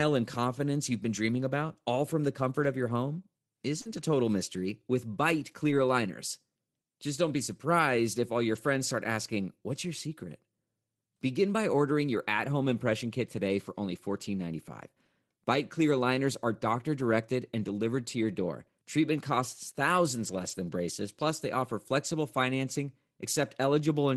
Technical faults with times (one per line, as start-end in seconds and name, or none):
3.81-3.87 short concealed packet loss
3.85-4.03 lost packet rebuilt from error correction
5.67-5.73 lost packet rebuilt from error correction
8.55 lost packet rebuilt from error correction
20.19-20.53 lost packet rebuilt from error correction